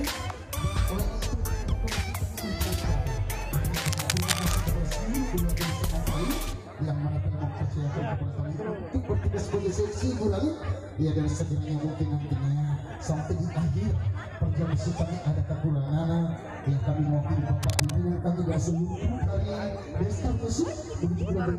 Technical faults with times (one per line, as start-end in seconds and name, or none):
3.82-4.68 cable scratch noise
15.88 block of digital silence
17.63-17.96 cable scratch noise